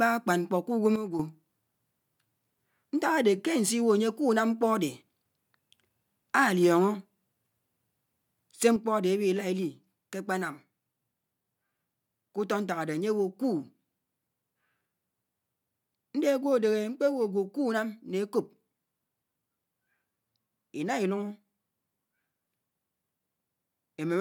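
A sudden gain jump, likely from the digital gain being switched between adjacent samples with no ramp. At 0.96 s the speech and background noise drop together by about 8 dB, snapping back at 1.20 s. From 8.76 s to the end, both sit about 4 dB lower.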